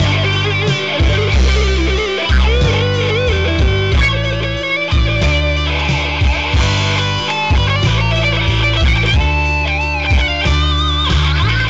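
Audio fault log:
No fault to log.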